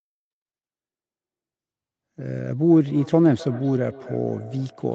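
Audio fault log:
2.71–4.95 s, feedback echo between two devices: From 2.71 s to the end of the clip, the speech returns at intervals of roughly a third of a second. The echoes sit about 20 dB below the direct speech. Each return sounds thinner and more ringing than the one before. A second device in the same room is playing this call aloud. The microphone picks that playback up again. Its echo canceller only removes its own device's output, so this loop gets through.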